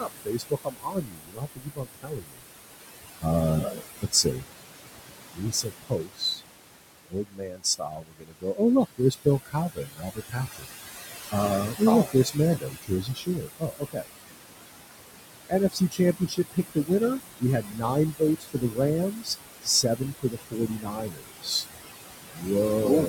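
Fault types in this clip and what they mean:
Noise suppressor artifacts: Throughout the clip, a suppressor estimates the steady background and pulls those frequency bands down, about 20 dB, frame by frame. The room noise, sitting only about 9 dB below the speech, drops away in pauses and surges back under each phrase. Unlike a gate or plain room hiss, the change is spectral and continuous, with the noise floor itself visibly breathing.
Speech cut by the noise suppressor: Here the suppressor mistakes parts of the speech for noise and turns them down with the background, by about 20 to 22 dB at the deepest. It happens at 0.0–2.43 s, 3.2–4.47 s, 5.32–6.47 s, 7.09–10.75 s, 11.31–14.08 s, 15.49–21.65 s and 22.31 s to the end. Within those spans, quiet consonants and word endings sound swallowed, totalling several seconds. This differs from the general artefacts because the speech itself loses energy, not just the background.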